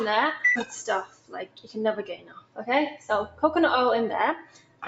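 A noise suppressor applied to music or sounds runs through the whole clip. It was built for speech, so it mistakes steady tones and tails for noise. Its gain swings by around 15 dB. The sound pumps and thins, within a call path that tops out at 8 kHz.

Sound cut by the noise suppressor then hits four spans: 1.05 to 1.76 s, 2.11 to 2.61 s, 3.27 to 3.43 s, and 4.39 to 4.83 s. Held sound sinks by about 16 dB in the first two spans, about 9 dB in the third and about 15 dB in the last. Attacks come through, while decays vanish early.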